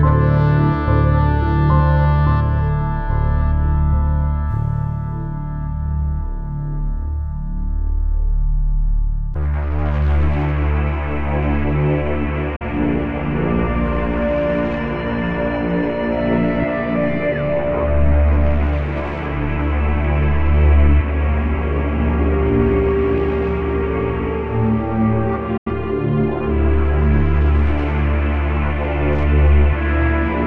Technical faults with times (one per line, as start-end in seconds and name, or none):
12.56-12.65 digital broadcast dropout
25.57-25.71 digital broadcast dropout